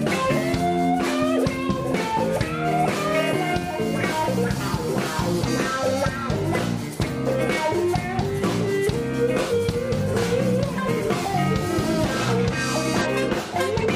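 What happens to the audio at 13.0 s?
Damaged data in the compressed stream corrupts a stretch of frames from 13.01 to 13.07 s. The decoder misreads them, loses sync and hunts for the next valid frame header, so about 60 ms of the audio becomes a brief glitch: a chirp, squawk, click or short hole.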